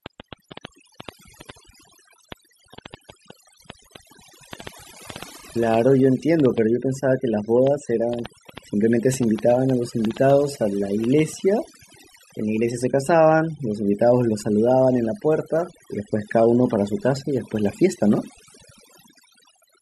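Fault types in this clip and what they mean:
overdone noise removal: Noise reduction pushed too hard, gating individual frequency bands down whenever they sit near the noise estimate, throughout this speech. The background falls to near silence with twinkling specks; a spectrogram shows isolated flickering dots and ragged, holed-out harmonics.
train of clicks: Repeated short pulses of similar shape at an uneven pace, about 4.1 per second, roughly fifty in all from 0.06 to 11.2 s, peaking about 10 dB above the speech, likely from equipment interference or a faulty connection. Waveform shows sharp spikes; spectrogram, thin vertical lines.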